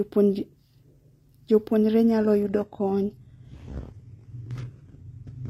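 At 2.04 s the speech switches abruptly, with no gap, to an adaptive stream at a lower bitrate, and stays there to the end. The player has dropped to a cheaper rendition, likely because the connection slowed. Before the switch the sound resembles roughly 96 kbit/s AAC. Afterwards nothing remains above 12.3 kHz and coding artefacts thicken, which fits a low-rate HE-AAC stream near 16 kbit/s.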